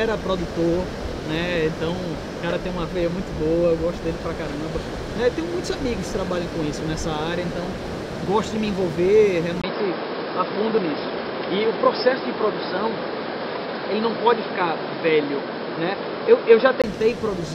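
At 9.62 s the audio turns dull and boxy after a brief gap of about 20 ms, with nothing above 5.3 kHz, a faint new background noise and no real level change, until 16.84 s. The likely cause is an input switched to a poorer device with a narrower band.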